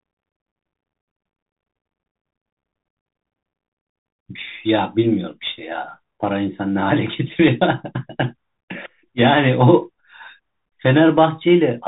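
From start to finish the speech carries a Bluetooth CVSD headset codec, and the damage is plainly audible. Nothing above 4 kHz survives, which fits a 64 kbps CVSD link that codes one up-or-down bit per sample with an adapting step. Unlike a plain telephone-band filter, it adds a granular hiss under the speech, loud high-frequency sounds outrun the step size and distort, and s sounds turn scratchy rather than simply dull.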